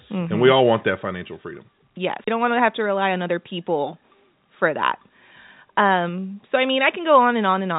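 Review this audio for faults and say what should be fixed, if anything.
The level drops abruptly by about 4 dB at 1.02 s, just after "all want that", and by about 2 dB at 6.09 s, just before "so I". This is likely a microphone volume stepped down by the call software's automatic input gain. To prevent it, disable automatic microphone gain adjustment and set the input level manually with enough headroom.

A brief mute of around 30 ms occurs from 2.24 to 2.28 s, and the sound jumps to a different place right before "don't want to have". This is a CD skip, where the laser jumped to another turn of the spiral. To prevent it, clean or replace the disc and isolate the player from knocks, or rip the audio with an error-correcting tool.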